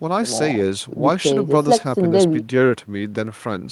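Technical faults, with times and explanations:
Nothing technical stands out in this speech recording; there's no fault to list.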